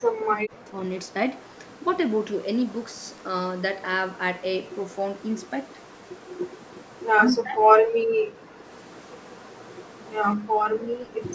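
Right from the start, 0.0 to 0.8 s, the talker drops out in pieces for most of that stretch, falling by something like 40 dB at worst. That's speech suppressed in double talk, likely because both ends were talking at once and the echo canceller couldn't tell its own talker from the loudspeaker echo, so it ducked everything.

From 1.06 to 1.84 s there's an echo leak: a faint copy of the voice trailing by 186 ms, sitting around 35 dB under the direct speech. It's likely the far end running on a loudspeaker with its canceller not catching everything the mic picked up. The same leak comes back for longer, 4.69 to 7.32 s, at the same delay and level.

Right as that ends, 7.3 to 8.47 s, the voice gets chopped again by double-talk suppression, losing a few hundred milliseconds in total at depths near 40 dB. Inside that, 7.93 to 8.12 s, the room tone itself dips by about 40 dB for a brief moment. 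That's background gated by the echo canceller: it clamped the mic hard while the loudspeaker played, then let go.

From 8.77 s to the end the 186 ms echo leak returns, a bit louder at roughly 30 dB below the speech. Within it, 10.62 to 10.93 s, there's one more short double-talk cut, around 35 dB deep. Through all of this the band tops out at 8 kHz, which fits ordinary call microphone processing.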